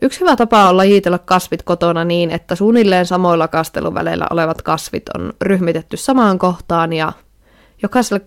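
No audible technical faults.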